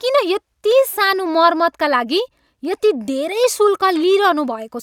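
No technical faults turn up anywhere in this recording; the speech simply runs along with nothing breaking into it.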